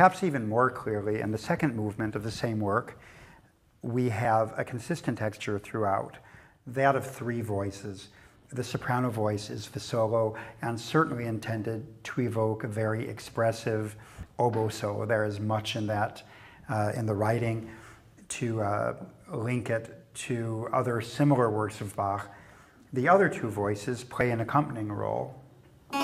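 Audio missing between chunks at 4.25, 14.23 and 24.21 s: brief skips of about 20 ms, ten seconds apart, likely lost while the recorder switched between chunks.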